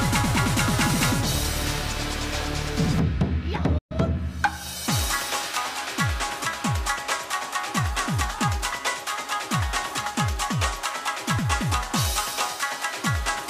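The audio has a playback stall from 3.78 to 3.92 s. Output drops to silence for 120 ms, likely because the player ran short of data.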